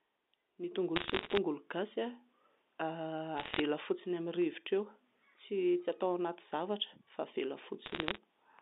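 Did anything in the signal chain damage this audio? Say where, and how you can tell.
Yes, bit errors on the digital phone line at 0.96–1.37 s, 3.37–3.60 s and 7.86–8.18 s cause crackle from flipped sample bits, around 1.0, 0.7 and 0.7 percent respectively. Unlike packet loss, the speech continues without gaps.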